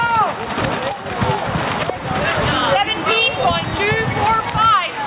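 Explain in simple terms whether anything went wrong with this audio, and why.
Yes, something went wrong. The problem is gain pumping, and it runs through the whole clip. The level keeps rising and then dropping back. Each loud moment pushes the overall level down, and it climbs again afterwards. The swing is big enough to hear clearly. The likely cause is a recording level set far too high, with a fast limiter or compressor pulling it down on every loud sound. Loud and soft parts end up closer together, so the sound feels squashed. The audio also passed through a phone-style call link, which explains why nothing above 4 kHz comes through.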